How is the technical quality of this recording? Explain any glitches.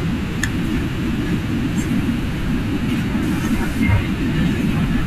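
The recording has one clear glitch, between 3.23 and 3.83 s. It is likely a stuck bit: one data bit stays fixed, shifting many samples by a step of about -35 dBFS. This produces harsh buzz and hiss. The waveform shows stepped offsets, and the spectrogram shows a broadband smear.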